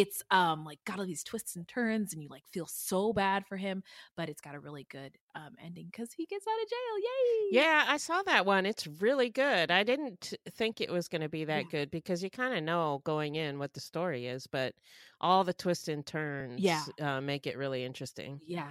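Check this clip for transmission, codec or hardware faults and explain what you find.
No faults found.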